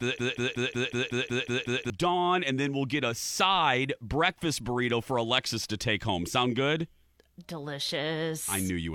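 From the very first moment, a fragment of about 0.18 s repeats exactly, back to back, nine times, a stuttering broken-record loop already under way when the clip begins. It breaks off at 1.9 s, just before "and then we'll get". The likely cause is a stalled player, encoder or stream that kept resending the last piece it held, so whatever speech belonged in those first two seconds is missing.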